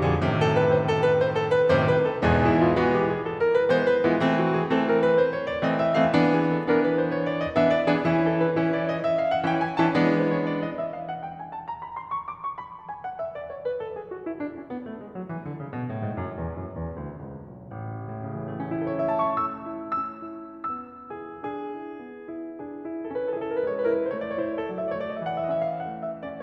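A music clip with no audible technical faults.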